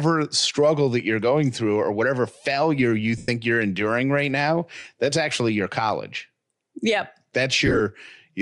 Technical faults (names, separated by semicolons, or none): Bluetooth LC3 compression; lost LE Audio frames